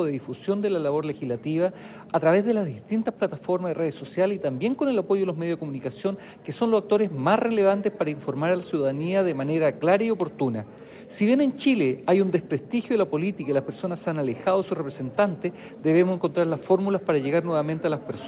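No technical faults can be heard: the audio carries the usual narrowband character of a call path, with nothing above 4 kHz, which fits a telephone codec such as G.711 mu-law, and the lowest bass is trimmed by the call's ordinary microphone processing.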